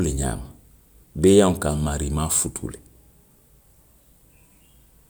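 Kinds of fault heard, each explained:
No kinds of fault are heard, so there are none to explain.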